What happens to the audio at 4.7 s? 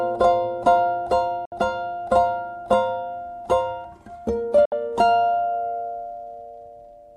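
The music drops out for a digital broadcast dropout, from 4.65 to 4.72 s. It fades to silence within 3 ms. The receiver lost good frames and muted until they returned. About 64 ms of music is missing, which fits two lost frames.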